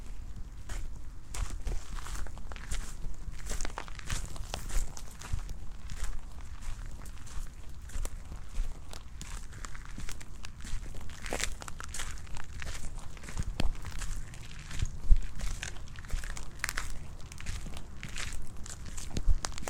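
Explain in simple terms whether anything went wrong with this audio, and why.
From 4.01 to 5.15 s a gritty crackle tears across the sound. This is processor overload crackle: the computer fell behind and skipped dozens of tiny slices of audio, each a few milliseconds long. Unlike a single dropout, it is a dense run of clicks that stops once the load eases.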